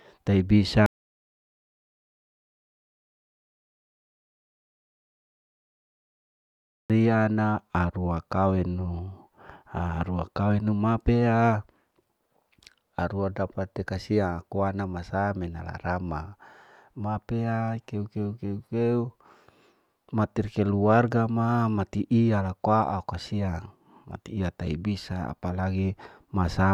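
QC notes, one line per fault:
0.86–6.90 s, audio dropout to silence: the speech cuts to silence for 6.04 s, returning at "na arua kawenu", likely because the input was lost.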